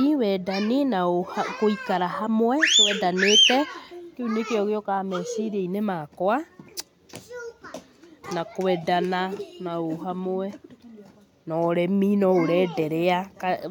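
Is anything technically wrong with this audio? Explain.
No, nothing is technically wrong with this speech recording. A careful listen turns up no fault at any point in the clip.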